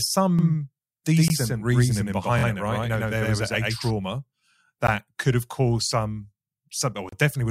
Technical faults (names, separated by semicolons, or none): doubled audio track; gap at a join of encoded pieces